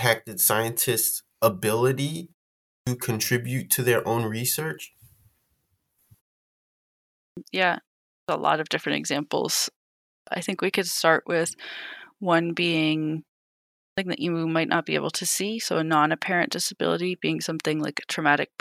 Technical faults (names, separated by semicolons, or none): clipped start after a pause